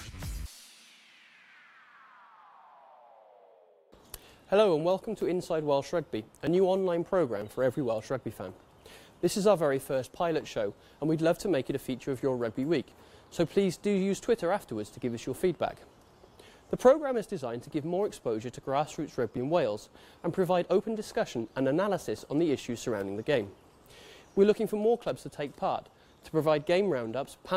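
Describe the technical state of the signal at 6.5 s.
At 6.47 s there is a small jump in the sound. A few milliseconds are missing, likely from a dropped buffer (overrun), with both sides joined directly.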